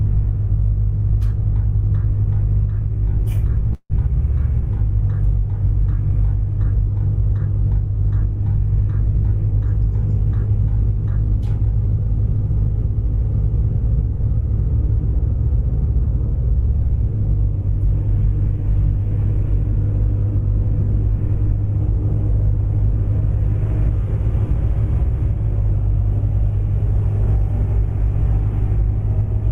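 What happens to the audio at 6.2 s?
Nothing goes wrong at 6.2 s; the audio passes through that moment intact, with no dropout, click or other disturbance.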